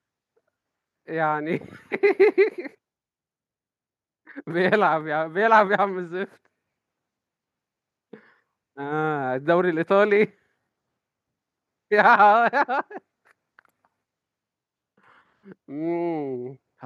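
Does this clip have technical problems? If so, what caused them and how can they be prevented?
No, nothing in this speech recording stood out as a technical problem on listening, so there is nothing here that calls for a fix.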